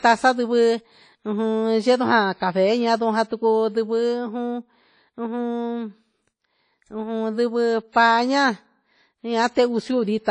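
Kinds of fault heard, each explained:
WMA compression: Ringing, washy hiss that swells and fades with the speech runs through the clip, and nothing is heard above 10 kHz. This fits a low-bitrate transform encode near 32 kbps, likely WMA. Simple low-pass filtering would not add this signal-following noise.
pre-echo: From 7.89 to 7.95 s, a short hiss of about 55 ms comes before a sharp attack, which sounds softened. The codec spread noise meant for the loud onset across the quiet moment before it. An ordinary echo would follow the sound, not precede it.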